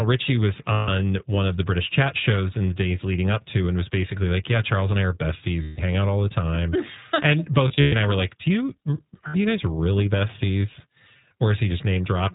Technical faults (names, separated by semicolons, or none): iLBC codec; lost iLBC frames